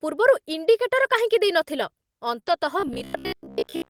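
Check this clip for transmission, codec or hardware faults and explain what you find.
The speech shows three kinds of network and playback fault: two stretches of error-correction rebuilding, a pair of back-to-back concealed losses, and a robotic buzz through the final second.

Lost packet rebuilt from error correction, 0.97 to 1.19 s and 2.47 to 2.53 s: packets went missing, but each following packet carried a low-bitrate backup copy, which the decoder played instead. The first stretch covers about 120 ms, fitting six packets; the second about 40 ms, fitting two. No gap opens, but the speech turns rougher and noisier there.

Short concealed packet loss, 2.39 to 2.43 s and 2.43 to 2.47 s: two consecutive chunks of about 20 ms each arrived too late, with no backup copy. The receiver filled them by extending the preceding sound, then blended back into real audio. This produces a brief smear or wobble just ahead of the second rebuilt stretch.

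Robotic sound from repeated short buffers, 2.8 s to the end: the likely cause is new audio arriving too seldom, so the software keeps replaying a 15 ms block while most of the real audio is skipped. That loop imposes a fixed pitch of about 67 Hz, making the speech a rigid, metallic buzz.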